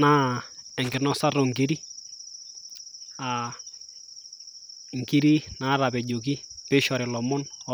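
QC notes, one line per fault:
0.84–0.98 s, loose connector crackle: for about 0.14 s the speech is broken up by an irregular burst of scratchy crackle as a worn or dirty contact rapidly makes and breaks, chopping the signal on and off. The uneven spacing and rough, gritty texture set it apart from a digital dropout, which leaves a clean gap, and from buffer clicks, which repeat at a steady rate.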